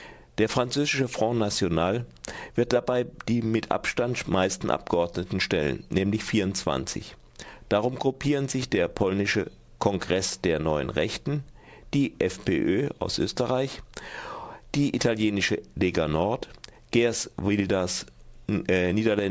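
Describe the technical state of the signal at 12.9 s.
At 12.9 s you're hearing aliasing, and it isn't local: it runs through the whole clip. The audio sounds like it was downsampled, likely from 48 kHz to 16 kHz, with no anti-alias filter first. So everything above 8 kHz folded back down below that edge as false, unrelated tones, roughly 20 dB under the main signal. That gives the top end a gritty, metallic edge, and the spectrum runs hard right up to 8 kHz.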